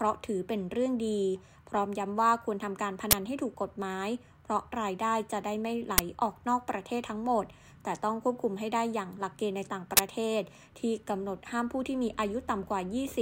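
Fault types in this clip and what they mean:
Uninitialised buffer: three loud cracks at 3.11, 5.98 and 9.97 s, 10 to 20 ms each, from stale buffer memory played out.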